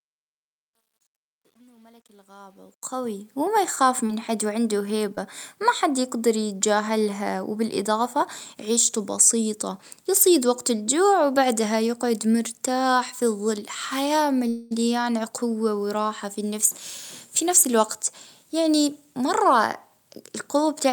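From 0.0 to 3.41 s, the fade-in shows truncation distortion. The level stage keeps too few bits and adds no dither, which fits roughly a 10-bit path. Up to about 2.78 s the quiet start is gritty. On a waveform it shows as staircase steps, and on a spectrogram as broadband grain. The fade then rises to 3.41 s.

At 4.07 to 4.11 s and 5.15 to 5.19 s, short concealed packet loss leaves brief smears. About 20 ms of audio never arrived, and the receiver extended the preceding sound for 23 ms and 17 ms before blending back. A spectrogram shows thin, smoothed vertical strips where detail blurs.

From 14.49 to 14.73 s, a call audio freeze inserts a 219 ms pause, with nothing lost. Held-up packets likely emptied the jitter buffer, so the last sound is stretched into a fading buzz or hiss. A spectrogram shows frozen horizontal smearing, then speech resuming.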